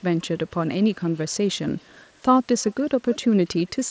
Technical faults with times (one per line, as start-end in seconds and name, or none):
0.00-0.55 echo leak
1.15-2.06 echo leak
2.61-2.73 echo leak
3.10-3.25 echo leak
3.68-3.81 echo leak